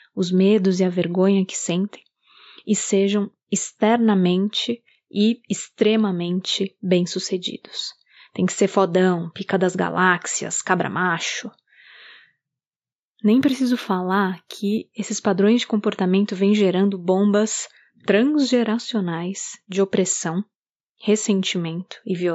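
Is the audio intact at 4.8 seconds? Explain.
Yes, the speech at 4.8 seconds plays through cleanly, with no dropout, click, distortion or other fault to be heard at that moment.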